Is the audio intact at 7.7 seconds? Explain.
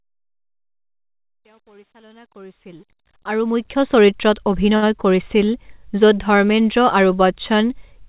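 Yes, the audio is intact at 7.7 seconds, with no fault at that moment.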